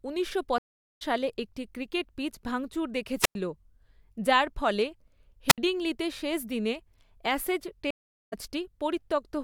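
At 0.58 s the speech stops for about 427 ms in a stream reconnect. The connection broke, and the player reconnected and restarted its decoder mid-stream. The speech resumes around half a second further on, so a short stretch is skipped.

At 3.21 s comes a wireless microphone squelch dropout. The FM radio signal faded, and the receiver's squelch muted the output. A brief rise of hiss leads into a hole of near silence lasting about 100 ms. A second one follows at 5.48 s, with a mute of 67 ms.

At 7.91 s another stream reconnect leaves 414 ms of silence. The speech then picks up roughly 0.4 s later than where it broke off.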